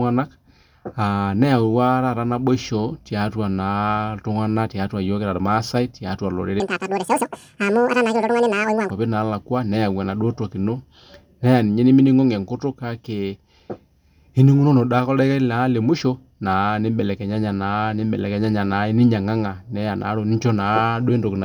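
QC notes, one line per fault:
6.60–8.90 s, section at the wrong speed: this stretch was likely clocked wrongly on playback, running 1.91 times too fast, so the speech jumps roughly ten semitones higher and turns hurried and squeaky, with pitch and tempo shifting together before snapping back.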